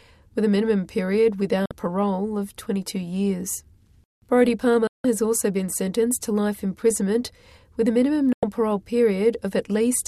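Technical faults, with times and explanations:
1.66 to 1.71 s, 4.87 to 5.05 s and 8.33 to 8.43 s, digital broadcast dropout: three times the audio snaps to silence through a fade of about 3 ms and comes back later, with the gaps running roughly 50, 170 and 100 ms. The receiver couldn't get clean frames and muted until good ones came back, so whatever was sent in those holes is simply gone. The gap lengths point to whole frames of about 24 ms being dropped.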